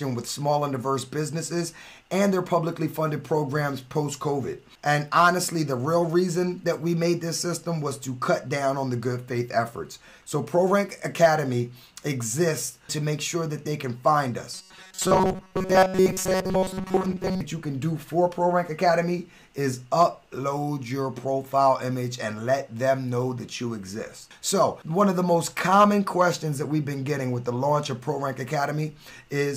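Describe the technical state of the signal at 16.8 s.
A short buffer, likely about 5.3 ms, was repeated in place of most incoming audio from 14.54 to 17.41 s, giving a rigid, robotic 188 Hz buzz.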